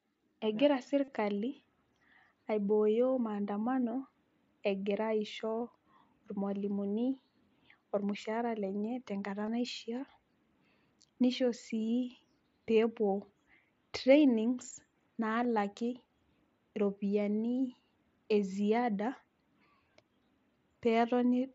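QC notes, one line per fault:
1.04–1.08 s, 7.12 s, 9.46 s (just after "ormushaara lenye tenkata") and 15.43 s, concealed Bluetooth headset packet loss: the link between headset and phone dropped voice packets, and the phone papered over each gap by repeating the closest-matching slice of the preceding waveform. The single lost frame at 7.12 s is barely noticeable. The 38 ms gap at 1.04 s, which fits five lost frames, comes through as a brief held buzz with a slight warble as the real signal comes back. All of this sits on top of the mSBC wideband link, which keeps its usual light graininess.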